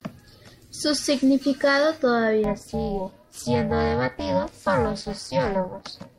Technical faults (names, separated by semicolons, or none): overlap-add ripple